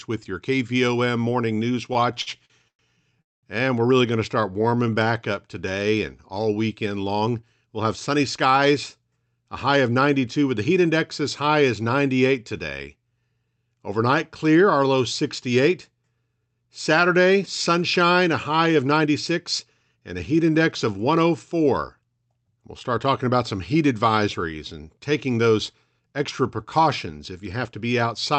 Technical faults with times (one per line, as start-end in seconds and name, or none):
1.93-3.19 repeated stalls (stutter)
3.22-3.46 call audio freeze
4.31-5.08 jitter buffer slow-down
7.08-8.46 jitter buffer speed-up
9.68-10.22 jitter buffer speed-up
18.75-20.16 jitter buffer speed-up
25.27-26.25 jitter buffer speed-up
27.40-28.35 jitter buffer speed-up